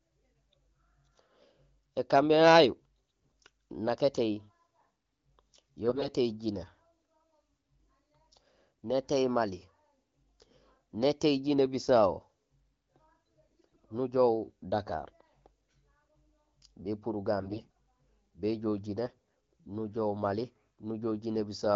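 A speech clip with AMR bit errors in five short bursts: 3.10–3.31 s, 5.87–6.09 s, 13.49–13.86 s, 17.37–17.73 s and 19.05–19.14 s. Flipped, weakly protected bits misplace pulses, making it hoarse and gargly.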